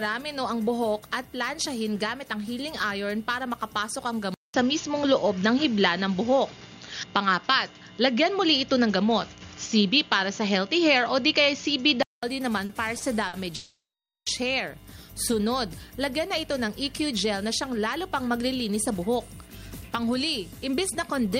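From 4.34 s to 12.23 s the audio sounds like an input switched to a poorer device. A 200 ms silence marks the switch. The sound then turns dull, with nothing above 6.9 kHz. The level shifts by about 5 dB. A new noise floor sits roughly 55 dB below the signal. A change of microphone or headset profile is the likely cause. Three short stalls from late packets follow, at 12.65 s, 12.97 s and 13.28 s. Each time a packet arrived late and the receiver held the last sound for 40, 30 and 50 ms. Each hold is a brief drawn-out sound, and nothing is lost. Next comes a call audio freeze from 13.55 s to 14.28 s. The sound stretches into a fading buzz or hiss and then 470 ms of silence. This inserts a 710 ms gap, likely from packets held up in transit, and the audio resumes where it stopped. Finally there are two jitter buffer speed-ups. From 16.59 s to 19.16 s the audio runs at 105% speed. From 19.96 s to 21.28 s it runs at 104%. 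The receiver cut tiny pitch-period slices to drain a backlog, roughly 150 ms and 70 ms in total. The first sounds hurried at unchanged pitch.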